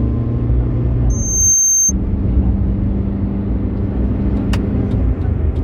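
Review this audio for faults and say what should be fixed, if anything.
A loudspeaker feedback squeal runs from 1.10 to 1.92 s. A 6.3 kHz tone swells over about half a second, ending roughly 5 dB above the sound. Mic and speaker formed a loop. Lower gain or notch 6.3 kHz.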